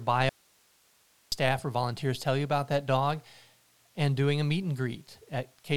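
From 0.29 s to 1.32 s the speech drops out for about a second, an audio dropout to a faint residue, before returning abruptly on "or volunteers tell you". Only hiss, roughly 35 dB below the speech, fills the gap, likely because the signal feeding the chain was lost while the path downstream stayed live. On a waveform the envelope collapses to a thin flat band with sheer edges; a spectrogram shows the harmonic bands vanishing into faint, even broadband noise.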